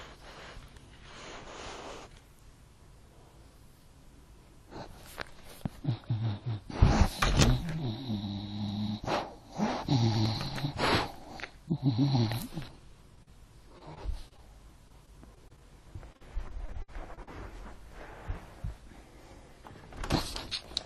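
Around 13.15 to 13.19 s and again at 13.23 to 13.28 s there's short concealed packet loss: roughly 20 ms and then 40 ms of audio never arrived, and the receiver papered over each hole by extending the preceding sound, so you get a quick smear before it blends back.

Right after, repeated packet loss gives that choppy, robotic sound in three stretches: 13.78 to 14.40 s with four gaps, 14.88 to 15.61 s with five, and 16.12 to 17.35 s with nine. That last one is the worst, with about a fifth of the span patched and gaps up to 59 ms.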